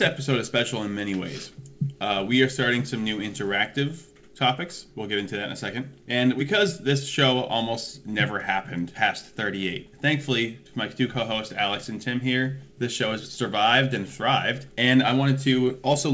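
No technical faults can be heard in the audio; it has passed through a wideband call path whose codec leaves nothing above 8 kHz, which fits G.722.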